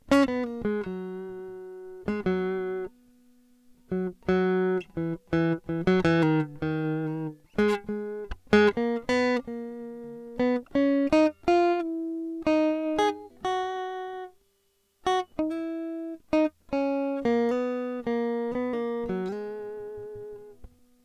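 There are no technical faults to describe in this music.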